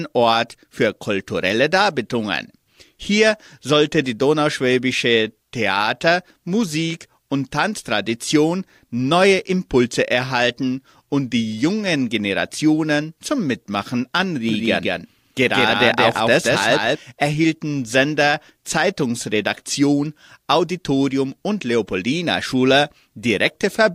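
From 14.49 s to 16.97 s the speech carries a doubled audio track: a second, full-band copy of the same audio trails the original by about a fifth of a second, a few decibels quieter. It has no reverberant tail or room colouring, so it reads as a distinct slapback rather than an echo. It switches on and off abruptly at the edges of the span. The likely cause is a second capture path running late, or an edit leaving two offset copies.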